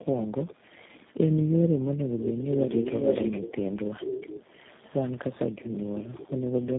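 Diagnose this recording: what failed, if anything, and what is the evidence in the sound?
The codec chain failed through the whole clip. Speech is rough, muffled and warbly, with nothing above 3.6 kHz. That roughness goes beyond what one narrowband coder would do. It points to tandem speech coding: several speech codecs in series, with the last stage fitting G.729A. Each border decodes the audio and encodes it again. Every coder then quantises the errors of the previous one, so the artefacts pile up.

The echo leak is call-processing damage. A delayed copy of the speech trails the original by about 0.45 s. It appears at 0.17–0.55 s, 0.94–1.13 s, 3.95–5.40 s, 5.61–5.78 s and 5.97–6.31 s. The loudest stretches sit about 10 dB below the speech, and the faintest about 25 dB down. The likely cause is a far-end loudspeaker whose echo canceller left residual echo. That residue was sent back.

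The background is gated by the echo canceller, also at the call-processing stage. From 0.55 to 0.75 s, right after the first echo burst, the room sound drops by up to about 40 dB. It returns after roughly 0.2 s. The canceller's suppressor clamped the microphone while it judged the loudspeaker to be active. It then released, and the background came back.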